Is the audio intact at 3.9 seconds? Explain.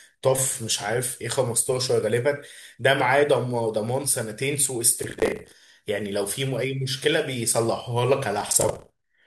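Yes, at 3.9 seconds the speech runs intact, with no dropout, glitch or other audible fault at that point.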